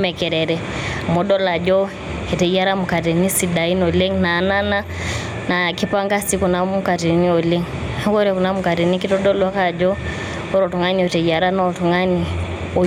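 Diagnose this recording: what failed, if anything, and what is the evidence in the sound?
Gain pumping runs throughout the speech: the gain swells in each pause and ducks under loud syllables, swinging around 10 dB. Likely cause: input gain set far too high, with a fast limiter in call processing clamping peaks. The waveform looks flattened.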